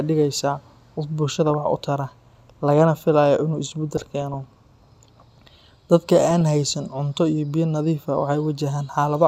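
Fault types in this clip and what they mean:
DAB burbling: Weak reception let bit errors slip past the error correction into the MP2 audio stream, at a rate of about 0.3 to 0.4 percent. Corrupted samples put short blips of noise in single sub-bands, and corrupted scale factors make sub-bands jump in level for up to a frame, so the speech gets burbling at 1.46–1.54 s just after "dhigaysaa qof", across a longer stretch at 3.97–4.34 s, and again at 6.31–6.41 s.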